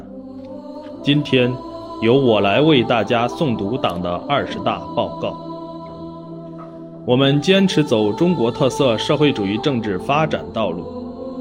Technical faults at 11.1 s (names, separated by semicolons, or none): none